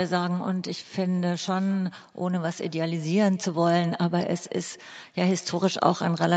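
Throughout the speech, echo with no canceller: the far end's loudspeaker feeds its microphone, returning each phrase about a fifth of a second later, faint and thin at about 26 dB down.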